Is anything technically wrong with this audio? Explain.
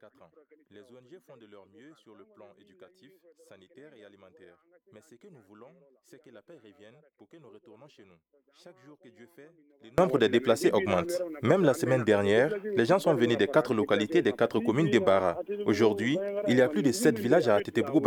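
Yes. From 0.0 to 9.98 s the mono-summed audio drops by about 29 dB to a faint residue, likely because one channel is inverted and their shared content cancels, unlike a plain gain drop.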